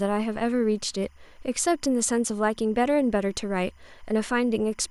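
Timecode bleed runs under the speech from start to finish. Linear timecode from a nearby track or cable has leaked into the audio path. The code is a square wave flipping between two pitches, near 1 kHz and 2 kHz. Its pattern repeats at 25 frames per second. The result is a steady chirping warble behind the speech. It sits faint, roughly 40 dB below the speech.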